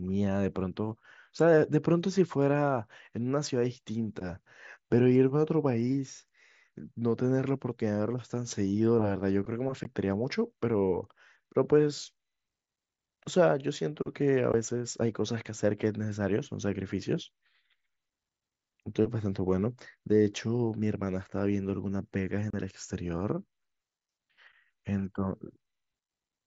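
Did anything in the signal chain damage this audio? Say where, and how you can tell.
Yes: three short holes with hard edges cut into the speech at 9.84 s, 14.52 s and 22.50 to 22.54 s, lasting 15, 15 and 30 ms. This is unconcealed Bluetooth headset packet loss on the wireless link, where missing voice packets became silence or an idle pattern, carried over the mSBC headset codec.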